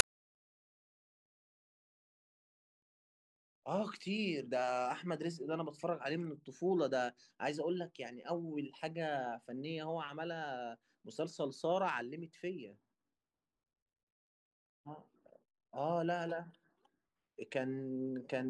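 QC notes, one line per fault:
0.00 s, file tags played as audio: the speech opens with a hard-edged burst of very loud white noise lasting about 5 ms, a sharp static tick rather than a rasp. A block of metadata holding compressed data, a cover picture, has been read as though it were samples. Because compressed image bytes are close to random, they decode as loud broadband noise, starting and stopping abruptly at the block's boundaries.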